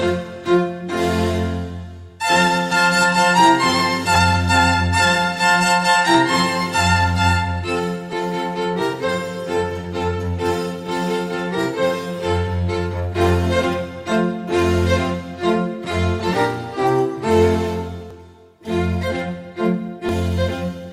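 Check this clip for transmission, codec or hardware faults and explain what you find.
The clip has one transmission fault, repeated six times.

Overlap between stream segments, at 4.15, 6.14, 8.13, 14.12, 18.1 and 20.09 s: adjacent segments carry overlapping time stamps, so the player trims a few milliseconds of sound that was never actually duplicated. The waveform jumps across each cut, producing a small click or skip. The spacing of roughly 2 s between events fits segments 2 s long, with some boundaries passing cleanly.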